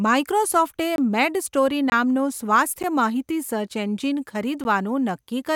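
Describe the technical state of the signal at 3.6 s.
At 3.6 s the speech signal is intact, with no dropout, clipping, distortion or other fault.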